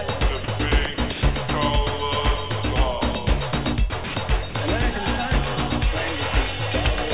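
At 0.44–0.48, 0.94–0.98, 1.12–1.22, 3.90–3.92, 4.04–4.16 and 4.50–4.54 s, the sound briefly gives way to flat hiss, likely sound dropped by the voice detector and filled with comfort noise. On a spectrogram these appear as short, even-textured grey patches. The waveform drops to a low, steady band, all of it below the 4 kHz ceiling of the call path.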